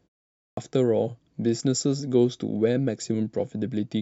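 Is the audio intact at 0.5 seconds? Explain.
No. The output device went to sleep during the 0.47 s of silence that opens the clip and needed time to wake. From 0.47 to 0.57 s a clipped start after a pause swallows 103 ms of speech, which bursts out abruptly without its first sounds.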